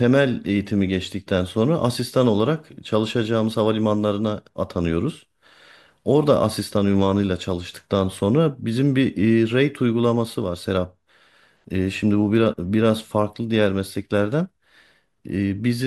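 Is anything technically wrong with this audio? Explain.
No, nothing technically wrong can be heard in this speech recording. There is no fault to point to at any moment in it.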